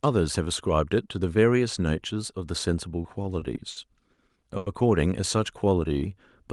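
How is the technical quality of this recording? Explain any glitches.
The recording has timing glitches in its second half, all from network delivery rather than from the mic or the room. It's speech over what sounds like an Opus call link, with highs trailing off around 12 kHz.

From 3.03 to 3.77 s there's a stretch of repeated stalls (stutter). Packets kept arriving late, so the jitter buffer ran dry about six times. The receiver held the last sound to fill roughly 140 ms in total, with the longest hold about 60 ms. Nothing's lost, but it drags and stutters.

At 4.13 to 4.19 s and again at 4.57 to 4.67 s you get a short stall from a late packet each time. The receiver stretched the last sound by 50 ms and then 90 ms, so you hear a held moment, with a slight buzz or dip, before it carries on.

From 5.37 to 6.14 s a jitter buffer slow-down kicks in. The receiver repeated single pitch periods to rebuild its reserve, adding about 105 ms. 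The speech plays at roughly 88% speed with unchanged pitch and sounds a bit drawn out.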